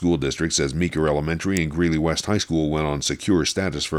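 An electrical switching spike lands at 1.57 s: a sharp snap, peaking around -10 dBFS and lasting only a couple of milliseconds, sitting on top of the sound. It is likely an arc from a nearby switch, motor or static discharge coupling into the audio line.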